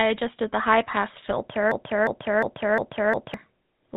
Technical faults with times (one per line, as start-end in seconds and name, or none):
0.00-3.97 GSM full-rate codec
1.72-3.34 broken-record loop